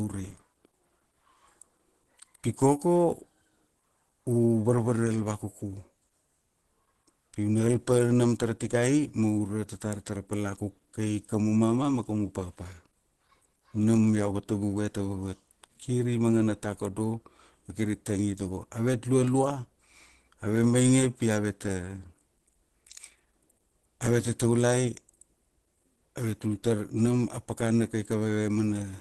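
Throughout, the speech carries Opus compression, plainly audible as a muffled, hoarse quality with nothing above 12.1 kHz, likely from a low-rate hybrid encode.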